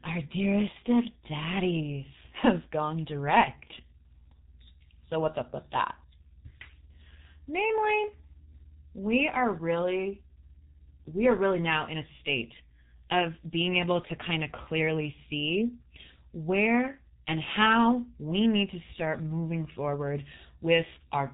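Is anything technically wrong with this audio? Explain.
Yes. For the whole clip, the speech has been through the G.723.1 codec, an early internet-telephony coder. It works in 30 ms frames and spends very few bits on each one, which fits a rate of roughly 6 kbit/s. Nothing above 3.8 kHz survives, so the voice sounds muffled and boxy. The codec's coarse, slowly updated voice model also adds a hoarse, buzzy roughness and smears consonants, so sibilants and plosives lose their edges.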